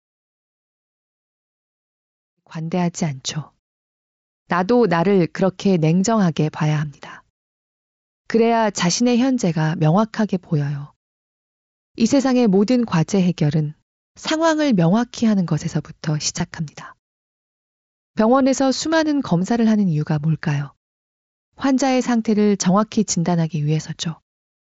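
This speech clip has one brief dropout at 16.38 s. It is concealed Bluetooth headset packet loss. About 15 ms of audio went missing, which fits two lost mSBC frames. The receiver filled the gap by repeating a matching stretch of recent waveform. The audio also fades in from about 2.5 s to 2.96 s. It is band-limited to 8 kHz, with light grain on loud sounds from the mSBC headset codec.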